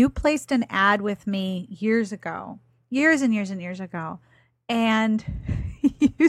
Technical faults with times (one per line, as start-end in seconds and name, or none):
none